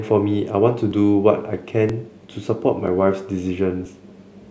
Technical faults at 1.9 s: audio missing between chunks

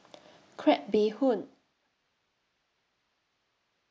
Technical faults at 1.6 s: none

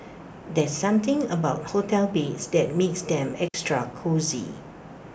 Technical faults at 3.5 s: digital wireless dropout

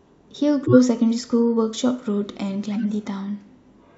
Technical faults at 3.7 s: none

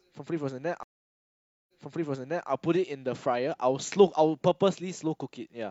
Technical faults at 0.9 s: stream reconnect

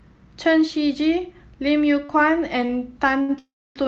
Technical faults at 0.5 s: none

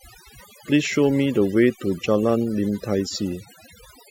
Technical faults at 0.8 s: overdone noise removal

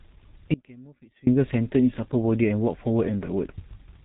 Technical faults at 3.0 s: G.723.1 codec

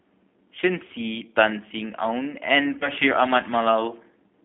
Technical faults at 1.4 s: G.729 codec

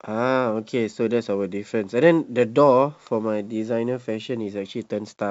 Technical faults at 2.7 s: none

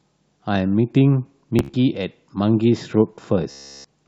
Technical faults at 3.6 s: Bluetooth stutter

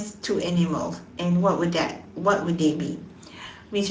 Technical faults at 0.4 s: Speex codec

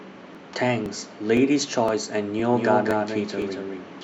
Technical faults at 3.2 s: doubled audio track

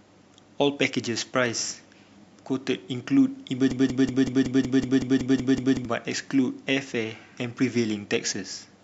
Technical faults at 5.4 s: broken-record loop

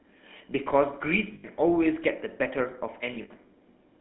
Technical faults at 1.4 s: GSM full-rate codec; lost GSM frames

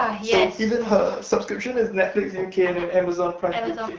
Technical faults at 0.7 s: none

